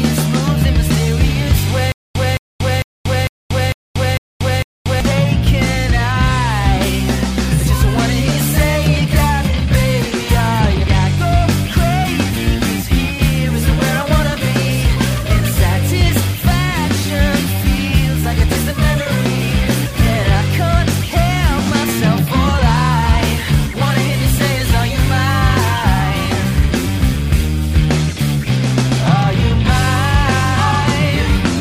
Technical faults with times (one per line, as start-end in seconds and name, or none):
1.92-5.00 stutter with silent gaps